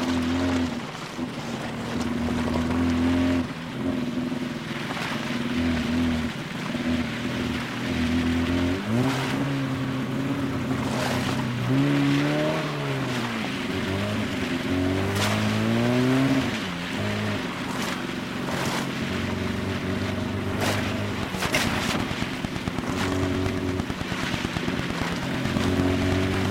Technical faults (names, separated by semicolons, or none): train of clicks